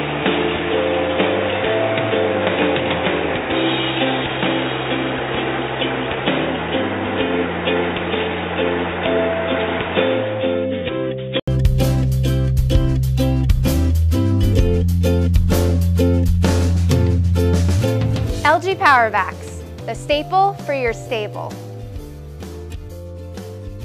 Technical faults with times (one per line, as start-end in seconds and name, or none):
0.00-11.48 input switched to a poorer device